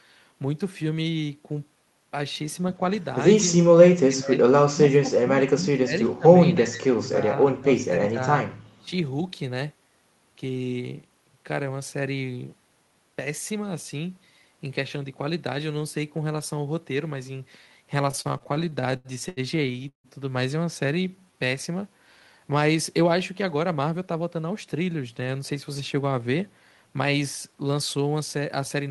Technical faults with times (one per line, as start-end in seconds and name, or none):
4.08-4.41 speech suppressed in double talk
4.71-6.25 speech suppressed in double talk
6.56-7.33 speech suppressed in double talk
7.58-8.19 speech suppressed in double talk
8.78-8.91 speech suppressed in double talk
18.11-20.07 repeated stalls (stutter)
20.95-21.37 jitter buffer slow-down
23.43-24.75 jitter buffer speed-up
28.40-28.90 jitter buffer speed-up